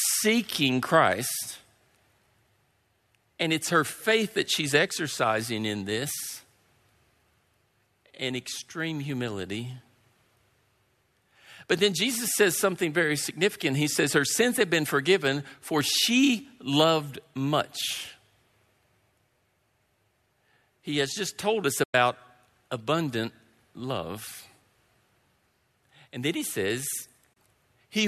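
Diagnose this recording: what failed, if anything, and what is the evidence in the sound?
A digital broadcast dropout occurs at 21.83 to 21.95 s, just after "has just told us", and again at 27.33 to 27.37 s. This is a failure at the reception and decoding stage. Each time, the speech fades to silence within about 8 ms, leaving a hole of roughly 96 ms and then 24 ms. Those lengths fit losing four frames and then one frame of 24 ms each. The receiver muted while corrupted or missing frames arrived, and the speech sent during those gaps is gone.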